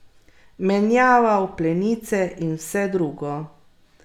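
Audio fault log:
Nothing wrong turns up anywhere in this bit of speech, so there's nothing to log.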